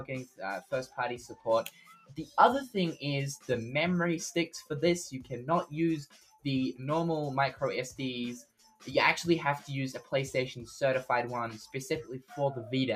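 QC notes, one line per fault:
Throughout: noise suppressor applied to music or sounds. A speech-tuned suppressor stays engaged, treating steady tones, ambience and decay as noise. Its gain keeps shifting, with a loss swing of around 10 dB, so sustained material pumps and thins while transients pass.
0.61–0.98 s, 1.68–2.37 s, 6.06–6.42 s, 8.43–8.87 s: sound cut by the noise suppressor. The suppressor misreads this material as noise and pulls it down harder, with the deepest drops about 13, 14, 15 and 18 dB. Held portions and tails sink or cut off early.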